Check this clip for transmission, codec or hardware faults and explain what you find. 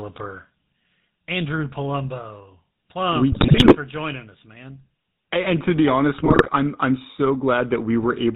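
Two faults are present: the whole recording has passed through the GSM full-rate codec, and two short bursts of GSM bit errors break up the speech.

The GSM full-rate codec damage runs from start to finish and is plainly audible. The codec rebuilds speech from a vocal-tract filter driven by a sparse, regularly spaced pulse excitation, which fits the old 13 kbps full-rate coder. That coarse excitation gives the speech a buzzy, gravelly edge. On a spectrogram, energy stops sharply at 4 kHz, and the harmonics look smeared and grainy.

GSM bit errors occur from 3.32 to 3.76 s, ending just before "for joining us man", and from 6.18 to 6.49 s, between "to be honest" and "I'm I'm so". Corrupted bits reached the decoder and scrambled its filter, pitch and gain values, so individual frames come out distorted or suddenly too loud. These stretches sound like squawks, pops and gargling. The waveform shows abrupt level spikes. 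On a spectrogram they appear as blocky, frame-length patches of misplaced energy.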